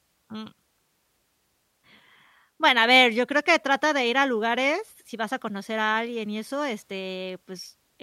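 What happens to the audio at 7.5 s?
At 7.5 s the speech carries a faint, fast rattle of tiny ticks, roughly every 30 ms, riding on the louder, sustained parts and dropping out in the pauses. These are clock slip clicks, running from 0.13 s to the end at 8.02 s. The likely cause is two devices on unsynchronised clocks, off by something like 700 ppm, so a single sample is dropped or repeated each time that drift adds up to a whole sample.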